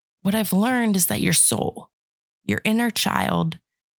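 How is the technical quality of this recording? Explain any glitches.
Nothing in the recording stood out as a technical problem on listening, so there are no glitches to explain.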